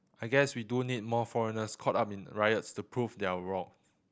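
No technical faults can be heard anywhere in the speech.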